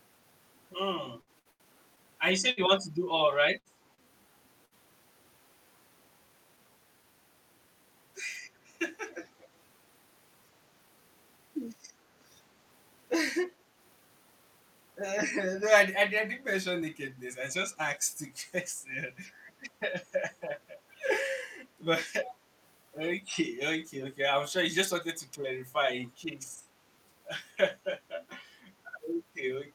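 From 1.21 to 4.74 s the speech turns choppy, with eight short holes, the longest about 89 ms. This is repeated packet loss (robotic sound): audio kept going missing, and each gap was patched by stretching the preceding sound.

At 9.10 to 9.45 s a faint copy of the speech trails the original by about 200 ms. This is an echo leak, likely from a far-end loudspeaker whose echo canceller let some of the sound return.

Between 16.82 and 17.76 s the speech runs at 103% of normal speed with pitch unchanged. This jitter buffer speed-up came from the receiver trimming a few tens of milliseconds of pitch periods to shrink its backlog.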